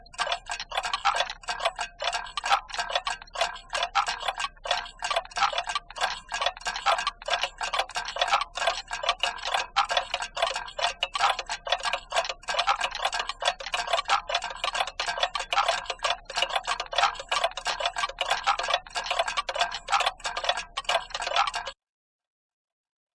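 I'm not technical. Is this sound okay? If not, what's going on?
No. Throughout, everything sounds slow and low, about 0.69 times normal speed and roughly 6.5 semitones deeper. This is a wrong sample rate, which fits 32 kHz audio played at 22 kHz.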